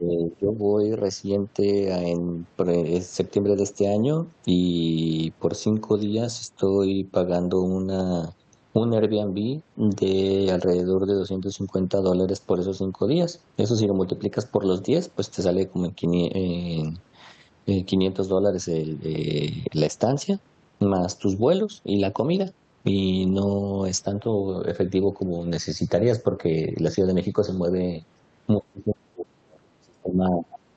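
Speech over a call, with the talker's level pulled down at 0.00–0.57 s (by about 20 dB) and again from 28.58 s to the end (by about 35 dB). This is likely speech suppressed in double talk, where the echo canceller ducks the near-end voice while the far side is also speaking. The call path's band-limiting to about 8 kHz is audible throughout.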